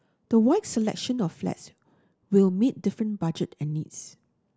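Speech recording, no technical faults detected.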